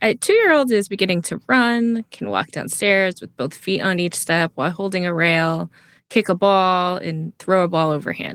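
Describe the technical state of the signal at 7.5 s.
At 7.5 s the speech is intact, with no fault at that moment; it is carried through Opus voice compression in hybrid mode at 20 kbps, fullband, which leaves only light coding damage.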